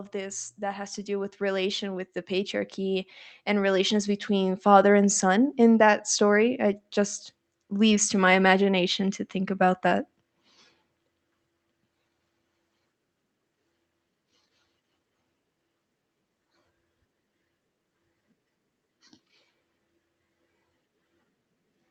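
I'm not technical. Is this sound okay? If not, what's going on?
No. Automatic gain rising, from 0.11 to 5.17 seconds: the recording system decided the speech was too quiet and slowly turned up its own volume control. Because it raises everything it hears, the voice and the background noise grow louder together, swelling over those first five seconds rather than jumping. The level settles by the time the speaker says "in that story". The call connection itself sounds like a normal online call.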